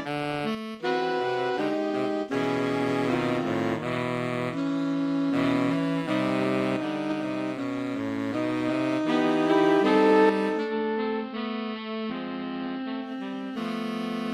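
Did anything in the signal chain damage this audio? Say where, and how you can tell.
Yes. From 10.6 to 13.1 s the sound gains faint hiss via 120 ms cross-fades: the receiver is blending digital radio to analogue AM.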